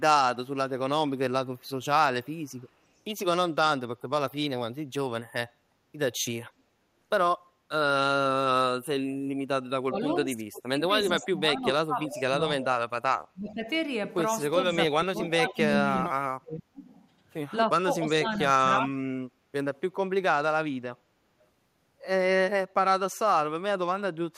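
It's a speech recording with echo leak: a faint delayed copy trailing by about 0.36 to 0.37 s at 1.61–2.68 s, then noticeably louder at 11.23–12.65, 15.23–16.02 and 18.27–18.41 s, likely a far-end loudspeaker whose canceller lets residue through. There's also speech suppressed in double talk at 9.8–12.32 and 13.33–19.07 s, where the talker dips by roughly 30 dB or more in patches, likely the canceller ducking its own talker along with the echo while both sides overlap.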